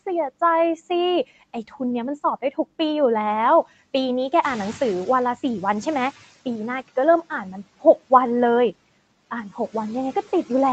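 Between 1.29 and 1.81 s there's speech cut by the noise suppressor. It mistook bits of the talker for background, pulling them down by up to about 12 dB. Only around a tenth of a second is hit in total, but those moments sound swallowed and faint.

From 4.42 to 5.46 s you hear the noise suppressor catching up. The room noise jumps by about 11 dB around 4.5 s, and the suppressor's noise estimate lags behind, so the noise comes through louder at first. Over roughly 1.04 s it adapts and pushes the noise down by about 11 dB.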